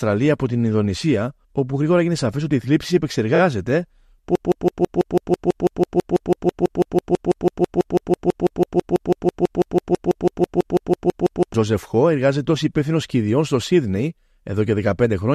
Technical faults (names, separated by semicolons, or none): broken-record loop